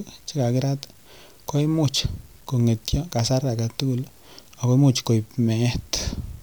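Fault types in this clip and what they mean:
Low bit depth without dither: The speech has a grainy distortion throughout. The grit follows the speech and turns harsher in quiet stretches. It sits about 35 dB below the signal. The likely cause is truncation with no dither, which fits 8-bit samples.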